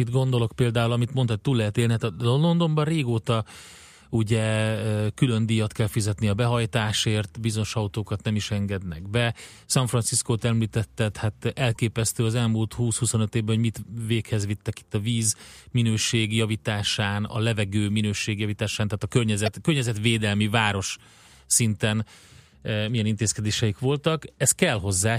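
Corrupt frame decoded at 11.74–11.77 s, after "említetted hát", and at 19.46–19.48 s, before "környezetvédelmi város szinten milyen". Damaged compressed frames were decoded anyway, throwing energy to wrong frequencies: first a faint glitch over a few frames, then a much louder one across a couple.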